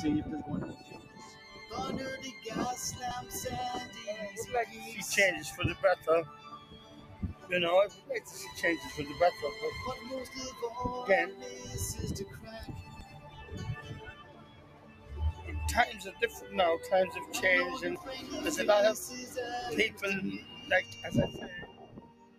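A speech-tuned noise suppressor stays active across the whole clip, treating held tones, ambience and tails as noise, so the level swings by around 15 dB. On a waveform, sustained portions shrink while attacks keep their height, and the spectrogram shows smeared, flickering energy between onsets.

Heavier cuts by the noise suppressor fall at 0.73–1.66 s, 5.97–8.31 s, 12.26–13.52 s, 14.11–15.46 s, 16.12–16.48 s, 19.9–20.94 s and 21.61 s to the end, each dropping by about 7 to 11 dB. Steady and decaying sound sinks or ends early while sharp transients still get through. These appear as dark holes in the spectrogram and a pinched waveform envelope.

Skips at 3.11 s, 13.01 s and 17.96 s each lose something like 50 ms. They are likely audio missing between chunks, which fits processing in roughly 5-second blocks. The two sides are butted together with no silence. The waveform shows an abrupt seam with no gap, and the spectrogram shows a vertical discontinuity.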